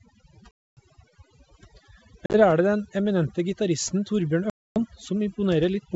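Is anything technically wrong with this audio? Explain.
Yes, there are two problems in this speech clip.

Overdone noise removal runs throughout. The suppressor cuts any frequency band near its noise estimate, taking quiet speech detail with it. The background drops and breaks up into twinkling specks. On a spectrogram the floor looks empty, scattered with isolated bright dots, and the speech edges look ragged.

Packet loss on an ADPCM call occurs at 0.51 to 0.80 s (about 260 ms lost), at 2.26 to 2.41 s (60 ms scattered over 80 ms, longest gap 40 ms) and at 4.50 to 4.79 s (about 260 ms lost). Each gap is filled with silence, and the decoder's predictor and step size drift out of step with the sender's. The speech returns slightly distorted, then settles. The waveform shows hard-edged flat holes, followed by a brief misshapen stretch. Beneath this, the wideband G.722 coding keeps speech clear up to 7 kHz.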